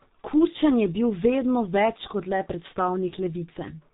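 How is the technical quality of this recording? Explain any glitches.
Quality is poor, with one fault running through the whole recording.

G.723.1 codec, present from start to finish: the speech has passed through an early low-rate telephony coder that squeezes it into 30 ms frames and rebuilds the voice from a slowly updated model, which fits a bitrate of around 6 kbit/s. Everything above 3.8 kHz is gone, so the speech sounds muffled and boxy. The heavy coding damage makes it hoarse and rough, and consonants smear into one another.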